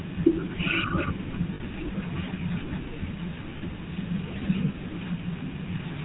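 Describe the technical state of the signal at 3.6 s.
Lost GSM frames from 3.58 to 3.63 s: about 40 ms of missing data, consistent with two lost frames, is filled by repeating the last good frame, giving a brief rough, metallic ring. Underneath, the GSM full-rate codec is plainly audible: pulse-driven vocal-tract modelling, nothing above 4 kHz, and a buzzy, gravelly roughness on the speech, consistent with the 13 kbps full-rate mode.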